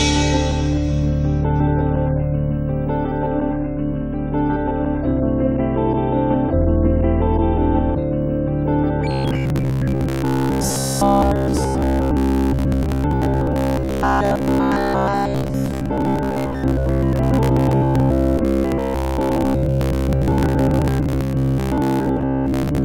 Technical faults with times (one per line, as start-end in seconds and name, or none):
9.11-22.84 robotic sound from repeated short buffers